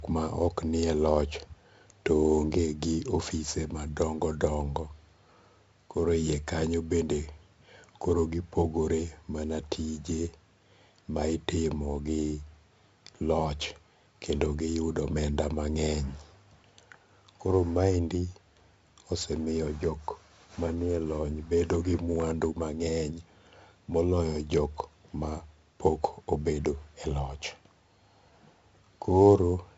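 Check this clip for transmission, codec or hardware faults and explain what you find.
One codec fault runs through the whole recording: heavy 4-bit ADPCM compression. Each sample is stored as a coarse 4-bit step from a predicted value, and the step size adapts too slowly. The result is a gritty hiss that rises and falls with the speech and distortion on sharp onsets. On a spectrogram, noise fills the gaps between harmonics during loud passages, and there is nothing above 7.7 kHz, which fits a 16 kHz sample rate at about 64 kbps.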